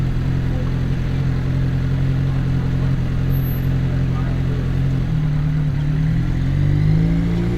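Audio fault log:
No fault is logged for this audio.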